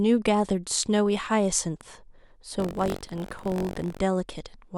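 From 2.58 to 3.99 s, buffer tearing: the writer and reader of the ring buffer have slipped and cross inside each period, so a small slice of every buffer replays audio around 70 ms old. The speech picks up a robotic 46.9 Hz rattle, which fits a 1024-sample buffer.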